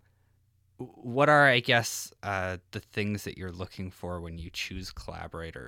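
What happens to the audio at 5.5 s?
At 5.5 s the speech carries on intact, with no audible fault at that moment.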